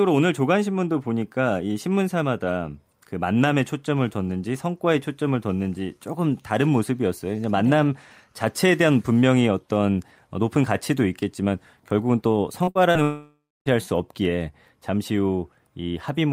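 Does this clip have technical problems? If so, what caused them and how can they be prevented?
Yes. Three short concealed packet losses occur at 12.63 to 12.70 s, 12.71 to 12.78 s and 12.91 to 12.98 s. Each time about 40 ms of audio arrived too late, and the receiver stretched the preceding speech for 33 to 44 ms before blending back. The result is a quick smear or wobble rather than a gap, which sets these apart from the dropout that follows. A slightly deeper jitter buffer with forward error correction would cover losses this short.

From 13.03 to 13.69 s the audio drags on as a fading buzz or hiss for most of that span, then falls silent for roughly a quarter second before speech resumes with material missing. This is likely a long network dropout, and the audible silence and lost content distinguish it from the brief concealed losses. A more stable connection, such as wired rather than congested wireless, would prevent it.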